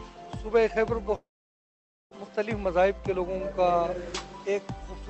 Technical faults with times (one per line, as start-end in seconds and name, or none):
1.15-2.14 long network dropout